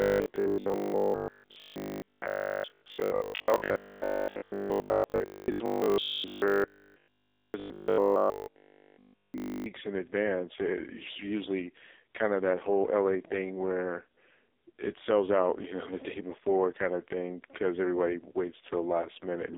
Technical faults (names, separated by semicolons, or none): AMR narrowband mobile codec; robotic sound from repeated short buffers